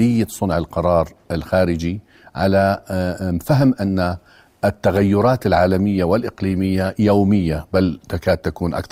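Adaptive stream at a lower bitrate from 4.95 s to the end: quality drops abruptly, without a gap, into stronger codec artefacts, consistent with a switch from roughly 64 to 32 kbit/s Opus.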